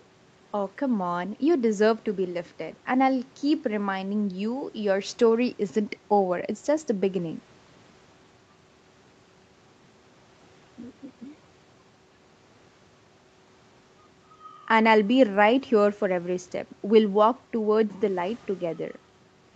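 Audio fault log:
No faults logged; the speech carries nothing above 8 kHz, as expected from the WebRTC call path, while the call microphone processing only trims the lowest bass; the call path's Opus coding sounds consistent with a 64 kbps setting.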